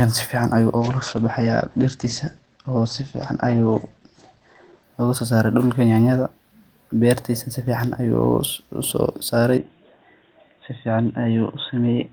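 From 0.79 s to 4.91 s, a call bitrate drop coarsens the speech. The top end falls from 20 kHz to 8 kHz. The sound turns rough and muffled for about 4 s. This fits an encoder pushed from roughly 32 kbps down to 12 kbps.

At 9.58 s the tone suddenly narrows and stays so to the end. Nothing is left above 3.8 kHz. There is no gap, and the level holds steady. A very faint new noise sits far below. The likely cause is an input switched to a poorer device.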